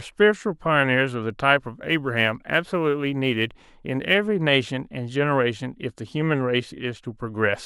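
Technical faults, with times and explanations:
1.67–4.14 s, sample clock jitter: the converter's timing wobbles by around a microsecond and a half, so each sample lands a little early or late, and the error scales with how steeply the speech waveform is moving. The result is a roughness or hiss sitting roughly 35 dB below the signal, strongest on loud, bright sibilants and gone in pauses. On a spectrogram, a diffuse noise haze appears only inside voiced and fricative energy, densest at high frequencies; the waveform looks unchanged.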